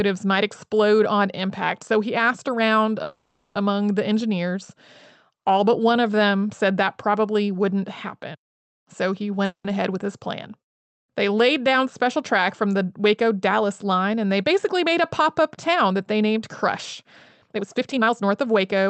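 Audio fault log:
3.03–3.57 s and 9.45–9.66 s, call audio freeze: a fading buzz stretches the sound for 0.52 s, then 0.19 s including 0.1 s of silence, likely from packets held up and an empty jitter buffer. Nothing is lost; later audio arrives correspondingly delayed.
13.84–16.37 s and 17.50–18.88 s, jitter buffer speed-up: the speech sounds hurried at unchanged pitch, running at 106% and then 126%, as the receiver trims pitch-period slices (roughly 150 ms, then about 0.4 s) to shed built-up delay.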